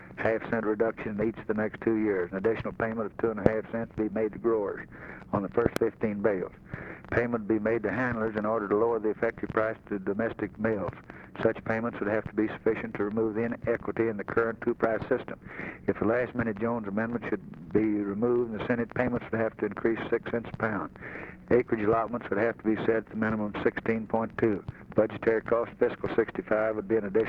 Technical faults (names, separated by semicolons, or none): loud pop